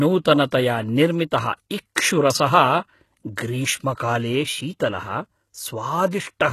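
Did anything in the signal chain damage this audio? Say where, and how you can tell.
Yes. Throughout, sibilants sound gritty and metallic with nothing above 12.3 kHz, likely HE-AAC compression at the codec stage, rebuilding treble by band replication at a bitrate near 16 kbps.

At 0.51 s a brief hiss leads an attack by 16 ms. This is codec pre-echo: quantisation noise spread across the transform block lands before the transient.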